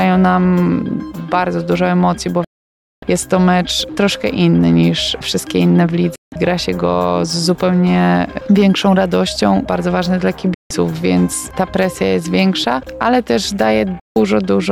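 Digital broadcast dropouts occur at 2.44 to 3.03 s, 6.16 to 6.32 s, 10.54 to 10.71 s and 14.00 to 14.16 s. Each time, the receiver stopped getting valid frames and muted: the sound snaps to silence through a 3 ms fade and resumes abruptly. The first hole lasts 0.58 s, the others 0.16 s each, lengths that fit whole 32 ms frames being discarded. Whatever was broadcast during those gaps is lost.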